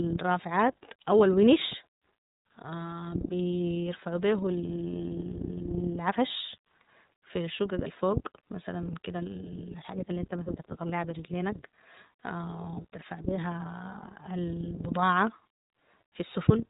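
From start to finish the speech carries plainly audible iLBC codec damage: nothing above 3.8 kHz survives, and each frame is coded independently, giving a rough, synthetic edge rather than a smooth lowpass muffling. The frame rhythm fits iLBC's 30 ms, 13.33 kbps mode.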